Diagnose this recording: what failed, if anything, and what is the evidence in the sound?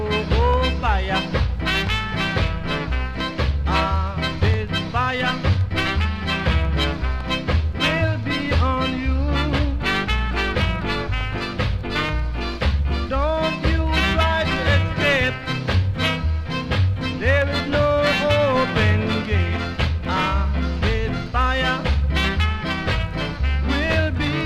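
Nothing failed here: the recording holds together the whole way with no dropouts, glitches or damage at any stage, so there's nothing to diagnose.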